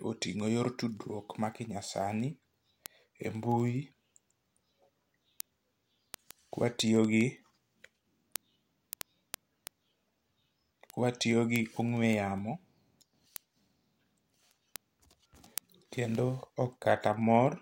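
A receiver reads the digital link on its own unlocked clock, roughly 300 ppm off the sender's, so from 0.15 s to 17.55 s a sample slips about every 70 ms. These word clock ticks sound as a steady run of clicks, around 200.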